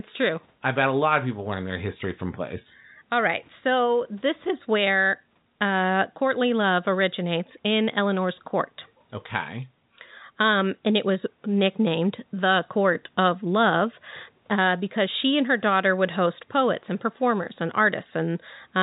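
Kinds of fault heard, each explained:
No kinds of fault are heard in this speech recording.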